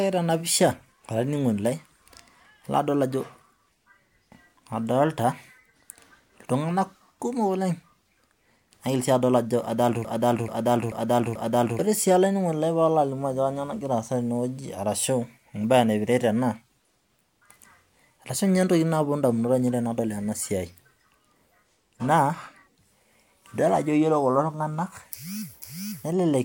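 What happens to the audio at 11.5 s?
At 11.5 s the speech is caught in a broken-record loop running from 10.05 to 11.79 s. A fragment of about 0.44 s plays four times back to back, identically, so the sound stutters rhythmically and the speech that belonged in that span never arrives. The likely cause is a player or stream that stalled and kept resending its last buffered piece. On a spectrogram or waveform, the same block of pattern repeats four times at equal spacing.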